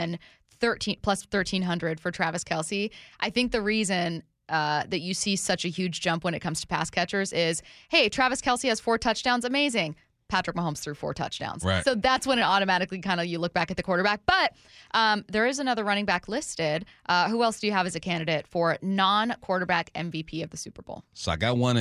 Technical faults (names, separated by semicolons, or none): none